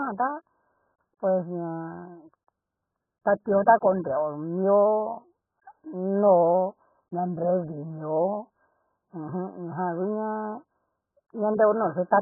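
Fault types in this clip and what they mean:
AAC compression: The speech has nothing above 1.8 kHz and sounds heavily dulled and smeared throughout, with a warbling, fizzy texture on sustained sounds. This is likely AAC-LC coding at a very low bitrate, consistent with about 8 kbps.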